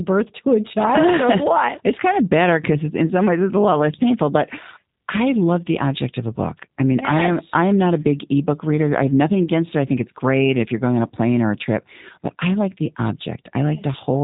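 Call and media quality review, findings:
G.729 codec, throughout the speech. Band-limited, nothing above 3.8 kHz; rough, buzzy, synthetic texture, plainly audible. Probable component: VoIP leg encoding with G.729, consistent with the 8 kbit/s G.729A variant. Mechanism: speech rebuilt from a vocal tract filter, pitch predictor and sparse pulse excitation per 10 ms frame, so fine waveform detail and upper band are discarded.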